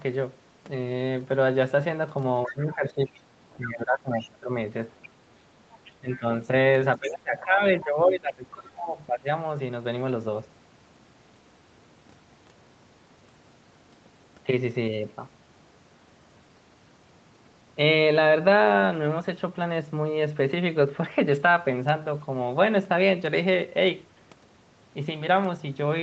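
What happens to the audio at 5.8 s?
From 5.71 to 6.19 s, the other side's voice leaks through faintly, roughly 25 dB below the talker. This is likely residual echo the canceller missed from the loudspeaker. Unlike room reverberation, which smears the talker's own sound, this is a separate second voice.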